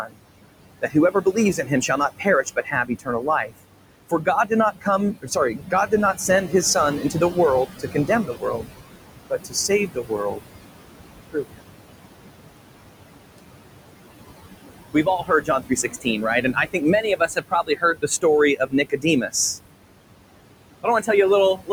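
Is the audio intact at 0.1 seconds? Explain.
No. From 0.02 to 0.2 s the noise suppressor cuts the speech, mistaking the opening sound for background and pulling it down by up to about 21 dB. The onset sounds swallowed and faint, and the waveform shows a flattened, shrunken envelope where energy should rise.

Noise suppressor artifacts are also present at 0.1 s, as they are throughout. The room noise, about 10 dB below the speech, is lowered by about 21 dB frame by frame. On a spectrogram the leftover noise appears as patchy, flickering speckles in place of a smooth floor.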